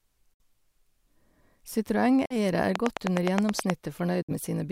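A speech clip with two separate problems. There are three short holes where the audio cuts to silence, at 0.34 to 0.40 s, 2.26 to 2.36 s and 4.22 to 4.32 s, each roughly 45 to 60 ms of missing sound. The speech picks up afterwards as though it kept running underneath. That's a likely Bluetooth dropout, with a handful of packets not reaching the headphones in time for each gap. Separately, from 2.76 to 3.71 s there's a train of clicks, about ten evenly spaced ticks at 9.5 per second. They sit roughly 20 dB above the speech, so they poke through clearly. A regular pulse like that likely comes from electrical interference nearby or a faulty connection or power supply.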